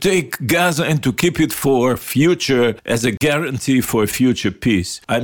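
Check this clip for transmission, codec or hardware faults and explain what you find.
One fault stands out, a block of digital silence. At 3.17 s the sound drops out abruptly for about 37 ms and returns with no fade, leaving a short hole. A run of samples was replaced by zeros, typically because the output buffer wasn't filled in time.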